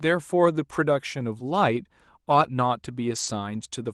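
At 3.15 to 3.25 s there is a lost packet rebuilt from error correction: about 60 ms of speech, which fits three lost 20 ms packets, was replaced by the low-bitrate Opus copies carried in the following packets. There is no gap, but this stretch sounds rougher and noisier than the surrounding call audio, which is limited to about 12 kHz.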